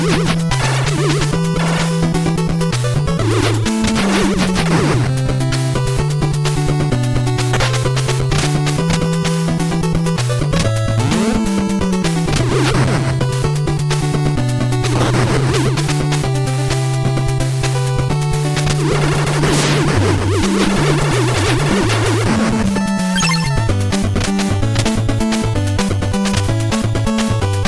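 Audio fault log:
Throughout: resampler restarted on every block. The 48 kHz to 24 kHz conversion ran on 10 ms blocks separately, leaving an edge error every block and a 100 Hz buzz under the sound. A spectrogram shows 100 Hz-spaced harmonic lines, with periodic waveform glitches.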